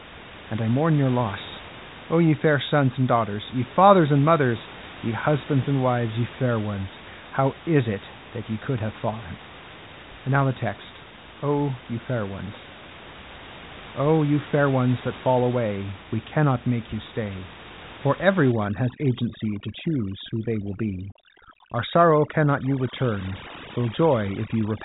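From 18.52 s, just after "you stay for every", to the end, overdone noise removal cuts bands near the noise floor along with quiet speech detail. Pauses turn near-silent with twinkling specks, and a spectrogram shows scattered dots and ragged holes.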